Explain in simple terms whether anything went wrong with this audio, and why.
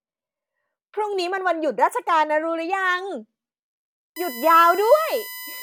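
From about 4.16 s to the end, a steady high-pitched USB whine sits under the speech. It's a fixed tone built on 1 kHz, loudest at 2 kHz, and quite noticeable. The USB connection draws power in regular 1 ms bursts, and that rhythm leaks into the audio.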